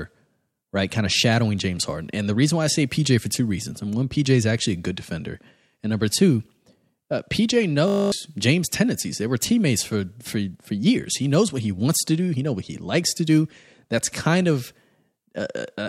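A system hang loop runs from 7.88 to 8.12 s in the speech: a stalled driver let the hardware replay one 20 ms buffer twelve times, producing a steady 50 Hz buzz.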